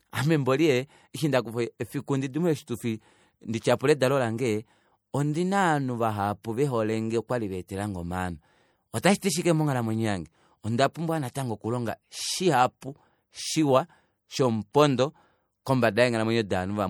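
Right from the start there's plainly audible codec damage, most likely MP3 compression at a rate that fits about 64 kbps. With so few bits, faint detail flickers in and out between frames, so the speech sounds watery and swirly, with metallic, chirpy edges on sibilants. At 14.73 s there's a pre-echo: a sharp onset lands late in a transform block, so quantisation noise meant for the loud part smears backwards about 16 ms, putting a short hiss just before the attack and softening it.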